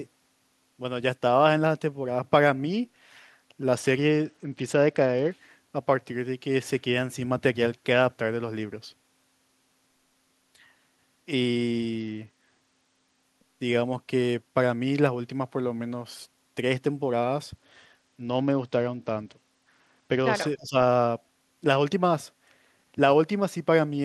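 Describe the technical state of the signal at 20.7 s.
At 20.7 s the speech sits inside a brief dip from 20.56 to 20.76 s, falling by roughly 15 dB. That points to speech suppressed in double talk, likely an echo canceller mistaking overlapping talk for echo and attenuating it. The level dips rather than dropping to silence, unlike a packet dropout.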